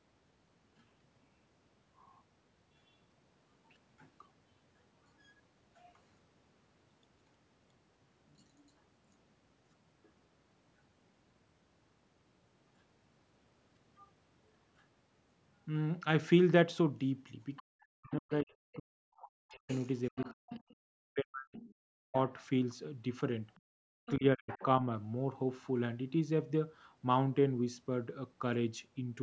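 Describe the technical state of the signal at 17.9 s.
At 17.9 s two faults overlap. The first is the other side's voice leaking through, from 17.56 to 18.12 s. A faint second voice sits under the talker, around 30 dB below the speech. It is brief. The likely cause is a loudspeaker on the talker's device playing the far end back into the microphone. The echo canceller did not subtract all of that sound, so a residue slipped through.

The second fault is speech suppressed in double talk, from 17.59 to 22.16 s. The talker's speech drops sharply, by as much as 40 dB at its deepest. It is affected for roughly three seconds in total across that span. This likely happened because both sides spoke at once. The echo canceller could not tell the local talker from the echo, so it turned both down together.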